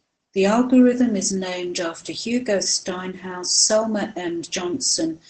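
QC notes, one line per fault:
Throughout: Opus voice compression. The encoder is running its SILK linear-prediction coder alone in wideband mode, starved of bits in a way that fits a low rate of about 12 kbps. The band is cut so nothing is heard above 8.5 kHz, and the excitation is coded coarsely. The result is plainly audible: the speech sounds muffled and dull, with a hoarse, slightly robotic edge where the fine detail of the voice's buzz has been approximated.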